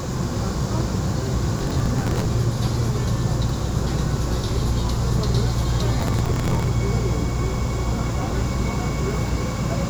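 Two bursts of processor overload crackle break into the sound, from 1.59 to 2.26 s and again from 5.99 to 6.68 s. In each, the processor repeatedly fails to finish its small buffers in time. The pattern fits buffers of roughly 10 ms, with each miss replaced by stale audio. The result is a gritty, tearing crackle. A waveform shows dense hard-edged discontinuities, and a spectrogram shows broadband vertical clicks through both spans.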